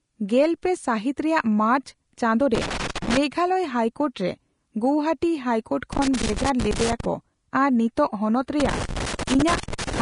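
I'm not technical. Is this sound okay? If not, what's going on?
No, it isn't. Three separate problems can be heard.

Throughout the whole clip, the speech sounds hissy and grainy, and the crisp top end is missing. Nothing comes through above about 10.5 kHz, so the sound is dull as well as rough. This clearly audible damage is likely Vorbis compression, a way of shrinking audio files. When squeezed hard, it cuts off the highest frequencies and stores the remaining treble so crudely that fine detail turns into a noisy fizz.

There are also bursts of irregular crackling and scratching from 2.55 to 3.17 seconds, 5.93 to 7.05 seconds, and 8.60 to 10.01 seconds. This is loose connector crackle. A worn or dirty plug or socket keeps losing and regaining contact when it shifts, chopping the sound. Checking or replacing the cables and connections used for the recording is the usual fix.

Finally, a few sudden sounds have a brief hiss just before them, which makes their start seem soft or smeared. 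This is pre-echo, and it happens at 2.94 seconds, 8.85 to 8.89 seconds, 9.18 seconds, and 9.60 to 9.63 seconds. Each hiss lasts only 12 to 34 milliseconds. It comes from the same compression. The file is processed in small chunks, and the noise meant for a loud moment is spread across the whole chunk, so it leaks into the quiet instant before that sound begins.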